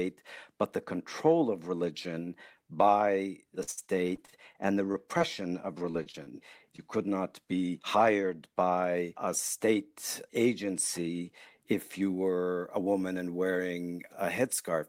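Repeated packet loss (robotic sound) runs from 3.63 to 5.22 s, just after "of religion by the", and again from 5.91 to 6.80 s, ending just before "could not be hired". Audio kept dropping out in short bursts. Some holes were patched by stretching the last bit of sound, and other pieces are simply missing. The longest gap is 57 ms in the first stretch and 27 ms in the second. About 17% and 13% of each span is concealed, so both sound choppy and robotic.

Pre-emphasis left on affects the audio from 12.02 s to the end. A treble boost was applied and the matching de-emphasis never undid it, leaving 10 kHz about 11 dB hotter than 1 kHz. The tilt fits the 50 µs FM curve. The speech turns thin, bright and hissy, with sibilants pushed harshly forward.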